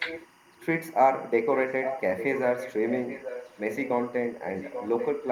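Timecode bleed runs under the whole recording: a faint, steady chirping warble, far below the speech, flipping between tones near 1 and 2 kHz. Its rhythm fits 24 fps linear timecode leaking from an adjacent track or cable into the audio path.

Echo leak appears at 0.0 to 0.27 s, 1.52 to 2.01 s, 2.17 to 3.89 s and 4.47 to 5.09 s as a repeat of the speech trailing by 837 ms. It is quietest at the start, nearly as loud as the speech at 1.52 s, and moderately below it later. The likely cause is a far-end loudspeaker whose echo canceller let some of its microphone pickup return down the line.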